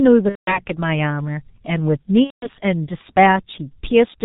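The whole clip has gone through the G.723.1 codec, and it's heavily damaged: nothing above 4 kHz, a muffled, hoarse quality, and smeared consonants, consistent with the 6.3 kbit/s mode. Its 30 ms frames update the voice model slowly, so fast transitions just blur.

Then there's VoIP packet loss concealed by the speech codec, twice: 0.29 to 0.60 s and 2.24 to 2.49 s. Each gap sounds like roughly 180 ms, about six frames, where the decoder briefly stretched the last pitch and filter into a fading sound, then muted from the third lost frame on. The speech stays weak for a moment after it recovers.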